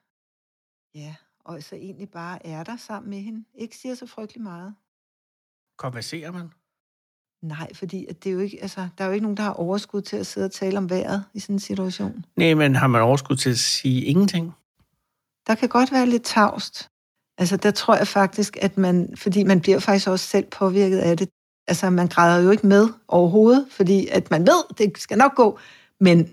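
A speech recording with two episodes of automatic gain rising: from 0.79 to 4.82 s the level climbs about 7 dB, and from 7.48 to 13.73 s about 11 dB. The gain control is boosting an input it judges too quiet, so voice and background swell together.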